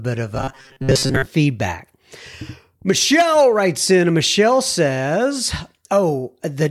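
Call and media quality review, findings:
Robotic sound from repeated short buffers, 0.35–1.25 s after "of a": rigid 133 Hz metallic buzz over most of the stretch, likely jitter-buffer underrun looping about 7.5 ms. No silent gaps, fixed pitch.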